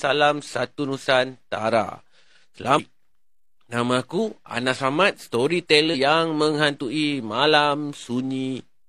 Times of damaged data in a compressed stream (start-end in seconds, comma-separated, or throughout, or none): 2.74-2.80